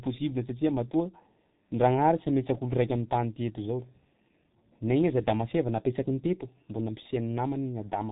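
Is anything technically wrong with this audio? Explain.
Yes. Throughout, the speech sounds muffled and hoarse, with smeared consonants and nothing above 3.8 kHz. This is heavy G.723.1 codec damage, consistent with a bitrate of about 6 kbit/s.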